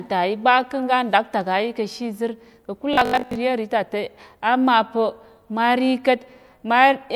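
Between 2.93 and 3.35 s, just after "nɗaktak ayi kishizir ka̱kul", new audio likely stopped arriving in time, so playback kept re-issuing the last short chunk in place of the real signal, for most of that stretch. This is robotic sound from repeated short buffers: the repeats impose a fixed 50 Hz buzz, which fits chunks about 20 ms long. The speech turns rigid and metallic, loosely tracking the words, until "iyemri tate amapa̱ mari".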